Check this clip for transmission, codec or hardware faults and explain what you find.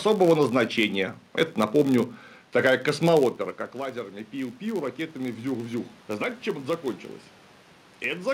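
Two faults stand out in this speech clip: a steady buzz from a filter that loses its state at each block, and an automatic gain control that ramps up partway through.

The filter restarted on every block problem runs the whole way through. Instead of carrying its memory from one block to the next, the filter starts each block from silence, so every block boundary kicks off a small transient. Those ticks land about 93.8 times a second, which fits a 512-sample block, and they merge into a low buzz that grows louder when the speech is louder and fades in the gaps.

Then there's automatic gain rising, from 3.37 s to 7.11 s. Just before that stretch, around 3 s, the talker drops off the mic, and the level at the input falls by about 13 dB. The gain control reads that as too quiet and slowly winds itself up by about 5 dB over those few seconds. You hear the voice and the room noise swell together, a gradual lift rather than a jump.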